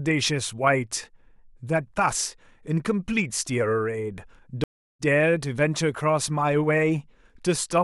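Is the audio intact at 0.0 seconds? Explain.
Yes, the speech is intact at 0.0 seconds, with no fault at that moment.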